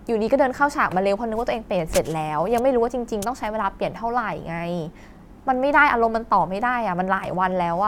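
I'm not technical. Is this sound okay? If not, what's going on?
Yes, this sound is okay, and nothing is going wrong with it.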